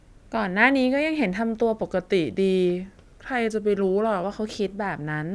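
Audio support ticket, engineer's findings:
Wrong sample rate, 1.83 to 4.24 s. Speech runs slow and low: speed 0.919x, pitch down 1.47 semitones, both shifting together. Probable component: playback clocking or resampler bypass. Ratio fits 24 kHz material played at 22 kHz. A pitch shifter would keep timing, and a time-stretch would keep pitch; here both drop by the same ratio, so it is a rate mismatch.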